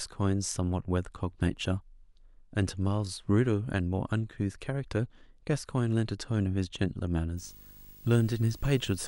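From 7.37 s to the end at 9.08 s, video or display buzz leaks into the speech: a rasping 50 Hz buzz at the picture's field rate, topped with hash and a thin 15.6 kHz line-rate whistle, sitting roughly 25 dB under the speech. That high tone separates it from plain mains hum.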